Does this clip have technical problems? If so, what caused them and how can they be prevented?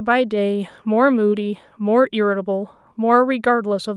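No, there are no technical problems in this recording.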